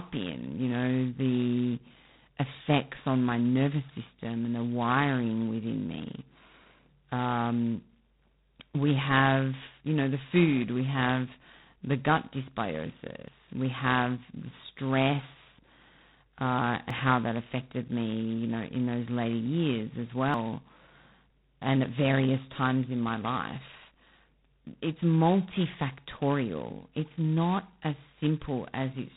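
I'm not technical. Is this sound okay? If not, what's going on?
No. The whole recording has a harsh, rasping hiss that rises and falls with the speech, and it sounds muffled and phone-like, with nothing above about 4 kHz. This is G.726 ADPCM, a telephone-style coding used here at a very low setting, which roughens every sound.

At 13.28, 16.90 and 20.34 seconds the speech jumps forward, skipping about a tenth of a second. These are likely dropped buffers (overrun): the recorder fell behind, that piece of audio was lost, and the two sides were stitched together.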